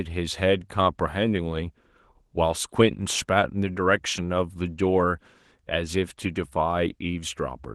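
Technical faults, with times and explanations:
Nothing here counts as a technical fault; the speech simply comes through Opus voice compression running at 20 kbps in its hybrid fullband mode, which leaves only light traces of the coding.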